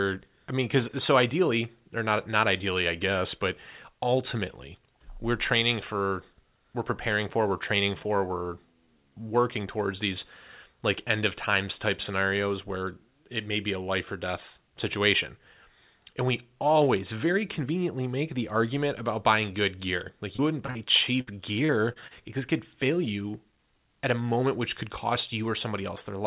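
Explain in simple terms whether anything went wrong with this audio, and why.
Short concealed packet loss happens six times, all close together: at 20.36, 20.66, 20.71, 21.66, 21.93 and 22.07 seconds. Each time, about 30 milliseconds of the call arrived too late to be played. The receiving end covered each hole by carrying on the last sound it had, then blended back into the real audio. You hear a quick smear or wobble, and a short sound inside the gap can disappear.

A burst of packet loss comes at 21.21 to 21.30 seconds, in the middle of that cluster. This time about 60 milliseconds went missing in a row, too long to hide neatly. The receiver stretched out the last sound and let it fade, so you hear a brief held buzz or hiss. The speech then jumps ahead, with that piece lost. All of this sits on a phone-style call line, which keeps nothing above 4 kHz and gives the speech a narrow, telephone sound.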